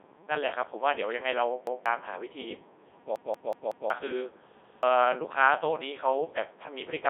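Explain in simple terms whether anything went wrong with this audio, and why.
The speech was sent through the Codec 2 vocoder, a very low-rate digital-radio system that transmits only a rough description of the voice and rebuilds it from simple tones. The result sounds robotic and buzzy, with nothing above about 3.8 kHz.

A repeated buffer also occurred three times: new audio arrived late, so the player replayed its last chunk of roughly 0.19 s. At 1.67 to 1.86 s and 4.64 to 4.83 s, a fragment plays twice, costing about a fifth of a second. From 3.16 to 3.90 s it repeats four extra times, a stutter that loses about 0.7 s.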